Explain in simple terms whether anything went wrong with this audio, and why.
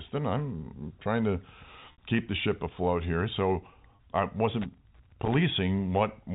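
Two things went wrong in this speech recording.

The first is packet loss with pitch repetition. At 1.92 s, between "I'm trying to" and "keep the ship afloat", about 60 ms of sound went missing in transit. The receiving end filled the hole by repeating the last tiny slice of voice, so you hear a brief held, slightly buzzy tone. The same happens for about 30 ms at 3.96 s. A smooth, steady stretch of tone, rather than silence or scratching, shows that these gaps were patched over.

The second is loose connector crackle, from 4.62 s to 5.38 s. A worn or dirty plug or socket keeps making and breaking contact, chopping the signal into an irregular burst of scratchy crackle that lasts about three quarters of a second. Unlike the patched gaps, it is rough and uneven rather than a smooth held tone, and it lasts far longer. The telephone-style coding of the call works as expected, with its narrow, phone-like sound.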